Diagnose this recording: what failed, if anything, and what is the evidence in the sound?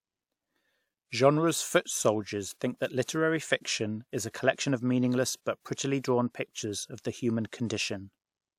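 Pre-echo at 3.04 to 3.08 s, just after "foot soldiers think that", points to the codec stage. A short hiss runs about 42 ms ahead of a sharp speech onset, softening its edge. The transform block spread quantisation noise meant for the loud attack back into the quiet gap before it.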